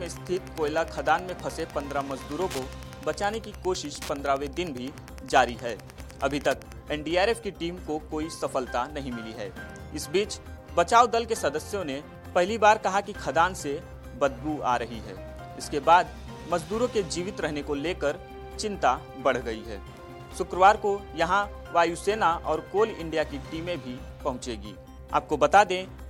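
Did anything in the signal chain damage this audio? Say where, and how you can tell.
Yes. From 0.0 to 6.75 s there is Wi-Fi interference picked up in the analogue wiring: a steady ticking about ten times a second, roughly 20 dB below the sound. The ticks repeat every 102.4 ms, the beacon interval of a nearby Wi-Fi radio, whose bursts the circuit rectifies into audible clicks. That fixed rhythm marks it as radio pickup rather than mains hum, which is a continuous 50 or 60 Hz tone, or random dropout clicks.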